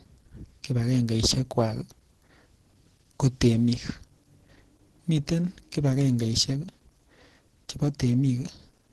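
Opus compression runs throughout the clip, likely from a low-bitrate Opus encode. Nothing sounds above 12.1 kHz, and the speech turns muffled, hoarse and grainy, which fits the codec's hybrid speech mode at around 16 kbps, with too few bits left for fine detail.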